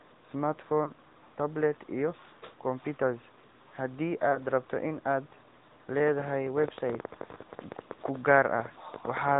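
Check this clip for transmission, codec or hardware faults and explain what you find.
Two faults are present: mobile codec coloring across the whole clip and two brief dropouts.

AMR narrowband mobile codec, throughout: the speech is sampled at 8 kHz and rebuilt from a vocal-tract model excited by sparse pulses, so nothing above 4 kHz survives. The voice sounds muffled, somewhat buzzy and synthetic, consistent with a mid-rate AMR-NB mode around 10.2 kbps.

Lost AMR speech frames, at 0.84 to 0.92 s and 4.32 to 4.39 s: in each spot the decoder appears to have rejected a corrupted frame and filled the gap by repeating the previous pitch and vocal-tract settings at reduced gain. Each is heard as a short dip or warble, consistent with a single lost 20 ms frame.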